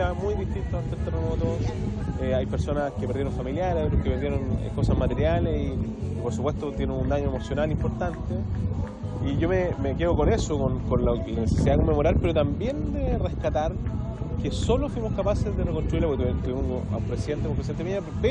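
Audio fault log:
No faults detected.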